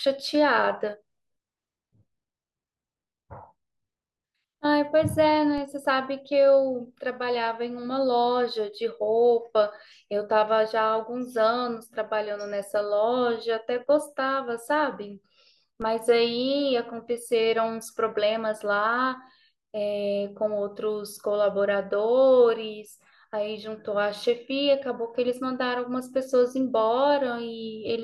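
At 5.58 s and again at 15.82 s the speech carries a DC step: the waveform's zero line jumps by about -30 dBFS, then bleeds away as a 20 Hz high-pass would drain it. Each jump lands as a brief low thump beneath unchanged speech.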